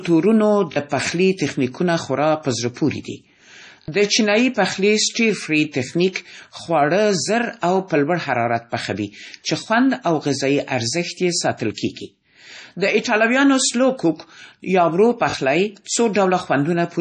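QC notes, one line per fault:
Throughout, MP3 compression: the speech has a heavy watery, swirling quality, and nothing reaches above 10.6 kHz, so the top end is flat and dull. The likely cause is a low-bitrate MP3 encode, around 32 kbps. Weak frequency components are dropped and restored from frame to frame, and treble above the encoder's cutoff is removed. Unlike the timed faults below, this colouring never stops and affects every moment of the clip.
0.72–0.76 s, 3.82–3.88 s and 15.30–15.34 s, repeated buffer: each time, one short slice of audio plays several times in a row with hard joins, giving a quick mechanical stutter. The stutter sits just before "پخلي تخنیکونه" at 0.72 s and just before "د چینایي پخلي" at 3.82 s. There are two extra plays at 0.72 s and 15.30 s, and three at 3.82 s. The repeating slice fits a 20 ms buffer that was replayed because fresh audio arrived late. That replaced around 40 ms of audio at 0.72 s and 15.30 s, and around 70 ms at 3.82 s. 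This is an exact repeat, not a silent gap or a decaying echo.
11.74–11.78 s, pre-echo: a brief hiss of about 36 ms comes just ahead of a sharp onset, and the attack itself sounds softened. The codec spreads its quantisation noise across a whole transform block. When the attack falls late in that block, noise sized for the loud part also fills the quiet moment before it. This differs from the repeated buffer because nothing repeats: it is a smear of noise that arrives before the sound it belongs to.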